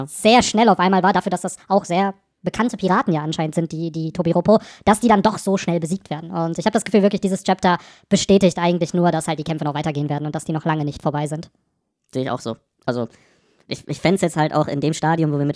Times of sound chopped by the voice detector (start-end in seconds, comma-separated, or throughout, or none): none